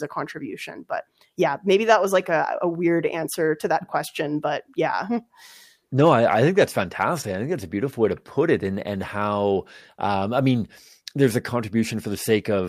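No technical fault can be heard anywhere in this speech recording. At no point from the opening to the final moment does anything in the sound stand out as going wrong.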